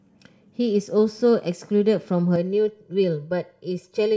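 From 2.36 s to the end of the speech, the sound turns hollow and phasey: channel delay (comb filtering). One channel runs about 2 ms behind the other, and when the two are folded to mono, what they share cancels at evenly spaced frequencies, the first notch near 300 Hz. The notches stay put, which separates this from flanging, where they sweep, and the thinning is scattered across the spectrum rather than a dull roll-off of the top end.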